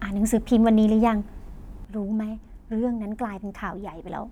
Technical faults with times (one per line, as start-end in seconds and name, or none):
1.85-4.32 sudden gain jump